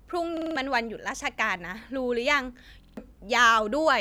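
From 0.37 to 0.56 s and again from 2.83 to 2.97 s, a repeated buffer stutters the speech. A 46 ms slice replays four, then three extra times with hard joins, which fits a 2048-sample buffer arriving late. Unlike a dropout, the sound repeats rather than going silent.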